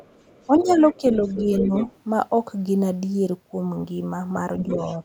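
From the start to 0.98 s there's faint leakage of the other side's voice, about 20 dB under the speech, likely echo the canceller missed. Between 0.47 and 0.78 s, and again from 0.98 to 1.03 s, the speech is suppressed in double talk, dipping a few dB while both sides overlap, likely the canceller ducking everything. The leak returns from 1.14 to 1.99 s, louder, around 10 dB down, with more brief dips at 1.24 to 1.48 s and 1.64 to 1.88 s. A last scrap of the far voice comes through from 4.68 to 4.97 s, about 15 dB below the speech.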